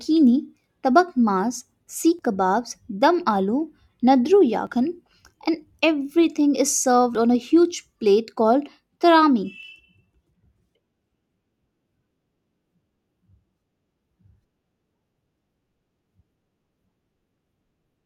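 At 2.19, 4.67, 7.15 and 9.63 s the speech skips, likely audio missing between chunks: about 20 ms drops at each 2.5-second chunk boundary, for example between "and everything is served" and "on a huge plate".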